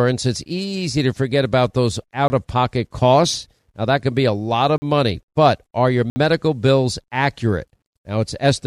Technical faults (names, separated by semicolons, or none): block of digital silence